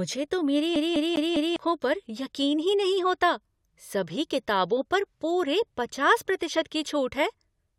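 From 0.76 s to 1.56 s the speech falls into a CD stuck on one turn. A scratch on the disc throws the laser back one track each time the same point comes round, so a single slice of about 201 ms is played four times in a row, with a short mute at every jump back. The result is a quick, evenly spaced stutter, the mechanical repeat of a skipping CD, before playback moves forward again.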